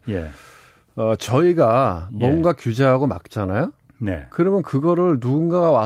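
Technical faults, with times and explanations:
No technical faults can be heard in this speech.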